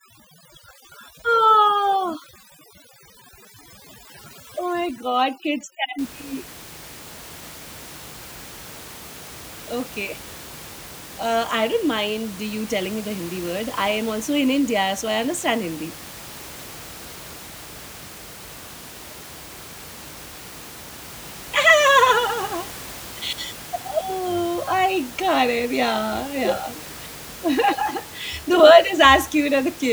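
From 0.0 to 5.99 s, overdone noise removal sets the noise reduction far too aggressively, shutting individual frequency bands whenever they approach the estimated noise level. The room noise, about 18 dB below the speech, drops and breaks up into twinkling specks, while quieter speech components vanish.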